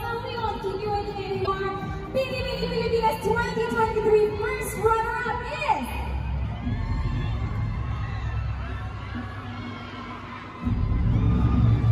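At about 1.43 s, running to roughly 1.48 s, there's a short burst of damaged data in the compressed stream. For those 56 ms or so the decoder is being fed bytes that don't make sense as audio frames, so it either misreads them or throws them out, loses its place, and hunts for the next valid frame header before it can lock back on. What you hear is a brief glitch cutting into the sound.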